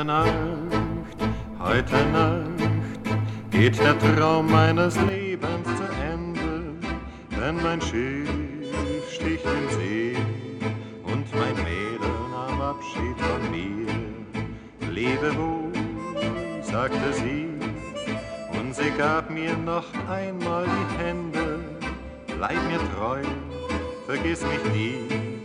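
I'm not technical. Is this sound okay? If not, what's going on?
No. From 5.09 s to the end, the sound turns duller and quieter with faint new background noise, likely because the input switched to a poorer device.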